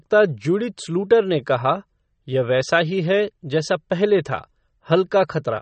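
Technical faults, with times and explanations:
Throughout: MP3 compression, likely the cause of the plainly audible damage to this speech. Nothing is heard above 8.3 kHz, and the band below it turns watery and swirly as weak frequency lines drop in and out between frames, with metallic chirping on s sounds and smeared onsets, which fits a bitrate near 34 kbps. A plain low-pass filter would dull the treble just as sharply but leave the remaining band steady, without this frame-to-frame swirl.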